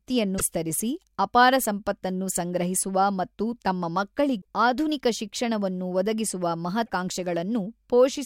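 Brief glitches at 0.35–0.41 s, 4.38–4.42 s and 6.83–6.89 s come from damaged data in the compressed stream: corrupted frames break decoder sync until it finds the next header.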